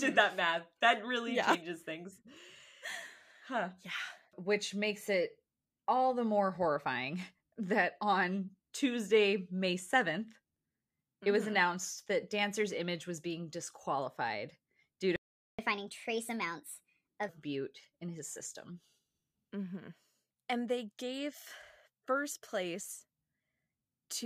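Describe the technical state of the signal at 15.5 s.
At 15.5 s the output is in a playback stall from 15.16 to 15.59 s. The player likely ran out of data or had its thread blocked. The result is a 426 ms gap of silence right after "being disqualified due to", before the sound picks up again.

Recovery follows as catch-up at higher speed from 15.59 to 17.29 s. The player resamples its backlog at 1.25 times normal rate to win back the lost time. The audio runs noticeably fast and sits roughly four semitones high, then drops back to normal by "bute in his".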